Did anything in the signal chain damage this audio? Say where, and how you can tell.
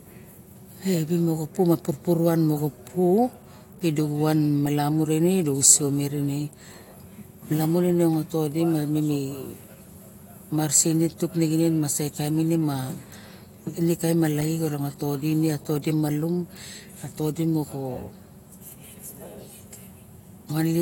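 No, nothing along the signal chain has audibly damaged this speech recording, and the signal holds steady and continuous without any trace of a defect introduced by capture, conversion, transmission, storage or playback.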